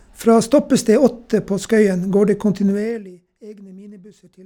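From 2.68 to 3.12 s the speech falls by roughly 25 dB with zipper noise. The gain drops in unsmoothed 1 dB steps, about fifty a second, and each jump ticks audibly. The waveform envelope shows a staircase, and the spectrogram shows faint vertical lines at each step.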